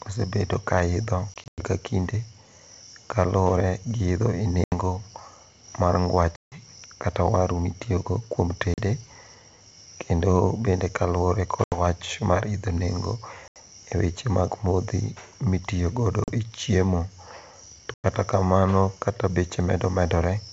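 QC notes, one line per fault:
1.34–1.65, 4.64–4.74, 6.36–6.61, 8.74–8.80, 11.64–11.78, 13.48–13.57, 16.24–16.33, 17.94–18.06 s: packet loss on an ADPCM call, with hard-edged silent gaps of 40 to 160 ms (the first scattered over about 240 ms). After each gap the G.722 decoder's predictor and step size are out of step with the sender's, so speech returns slightly distorted before settling.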